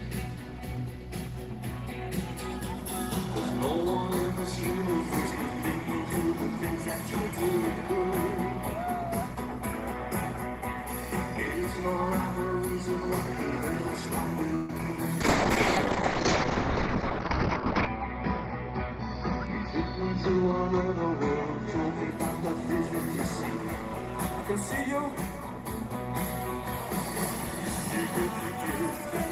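At 14.55 s a call audio freeze, likely from delayed packets draining the jitter buffer, stretches the last sound into a fading buzz or hiss until 14.70 s, inserting about 0.14 s of delay. At 14.78 s a short concealed packet loss follows: about 30 ms never arrived, and the gap is patched over as a brief smear or wobble. From 15.21 s to 22.17 s a call bitrate drop, from 32 to 8 kbps with bandwidth narrowing from 20 kHz to 6 kHz, leaves the audio coarse, watery and muffled, worst for about 2.65 s. From 24.92 s to 25.82 s a jitter buffer speed-up trims roughly 40 ms of pitch periods, so the sound runs about 4 percent faster at unchanged pitch.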